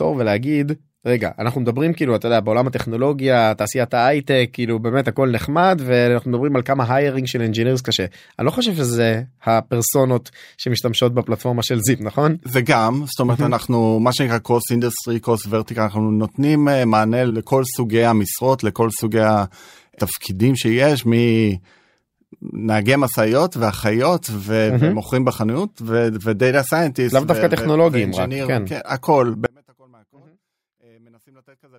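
At 29.46 s the speech cuts out abruptly and stays gone through the end of the clip, an audio dropout to a faint residue lasting a little over 2 s. The break is a hard edge rather than a pause or fade. What remains in the gap is a faint sound, roughly 35 dB below the normal signal level. That points to the wanted feed being lost while the path after the break stayed live, likely an interrupted source or connection upstream.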